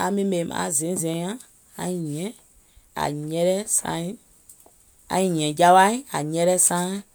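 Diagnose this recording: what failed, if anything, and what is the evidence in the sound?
Listening to the speech recording, nothing stood out at any stage of the chain.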